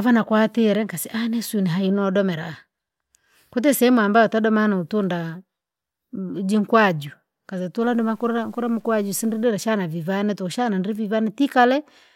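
Low bit depth without dither, 7.82 to 9.44 s: the speech turns gritty, with distortion about 40 dB down that follows the signal. This likely comes from truncation to around 9 bits.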